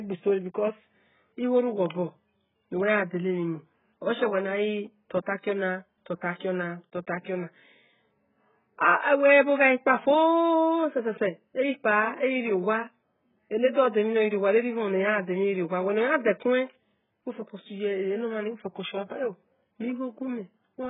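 Speech, heavily band-limited and smeared throughout, with nothing above 3.8 kHz. It sounds dull, with a watery, warbling texture on vowels and sibilants. This is likely AAC compression (AAC-LC) at a very low rate, around 8 kbps. A spectrogram shows a flat ceiling at 3.8 kHz. From 13.73 to 13.77 s there is pre-echo: a short hiss spread over about 34 ms before a sharp onset, because quantisation noise meant for the loud attack filled the whole transform block. On a spectrogram it appears as a pale broadband smear just ahead of the onset's vertical edge.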